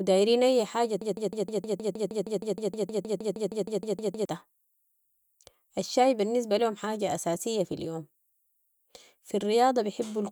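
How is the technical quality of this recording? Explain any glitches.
The recording has one glitch, a broken-record loop. Right after "أي حاجة", from 1.02 to 4.25 s, a 156 ms fragment repeats 21 times back to back, likely because the player or stream stalled and kept resending its last buffer. It sounds like a rapid mechanical stutter, and the speech meant for those seconds is lost. A waveform or spectrogram shows identical blocks tiled at a regular interval.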